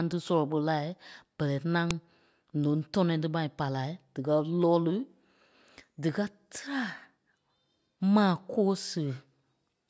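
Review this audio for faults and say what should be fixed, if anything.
A second WAV segment was joined on without stripping its header, so the file header played as audio at 1.91 s, just after "ɓɛlɛ ŋaŋ". Those few dozen header bytes are read as samples, giving a sharp, loud click that cuts across the speech. To prevent it, parse and discard each segment's header before concatenating or streaming the raw sample data.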